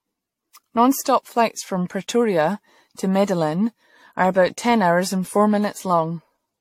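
Speech, with generation loss across the whole clip. It sounds swirly, smeared and hollow, and consonant attacks blur. Nothing reaches above 16.5 kHz. The likely cause is repeated lossy re-encoding, about four passes, which fits a 64 kbit/s AAC-LC chain compounding its artefacts.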